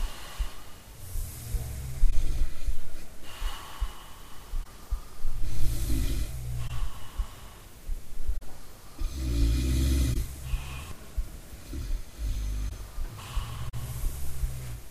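Corrupt frame concealed, seven times: 2.11–2.13, 4.63–4.66, 6.67–6.71, 8.37–8.43, 10.13–10.16, 12.68–12.72 and 13.68–13.74 s. Damaged AAC frames were covered by the decoder.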